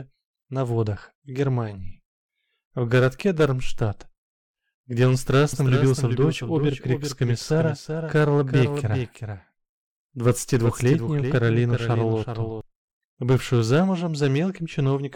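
The audio carries a doubled audio track from 5.53 s to 12.61 s: a second full-band copy trails about 400 ms behind, roughly 5 dB quieter, with no decay or room colour, and it starts and stops abruptly. This likely comes from a second, slower capture path mixed back in.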